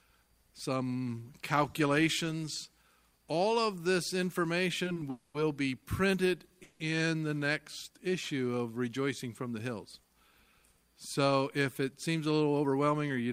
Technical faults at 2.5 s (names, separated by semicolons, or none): none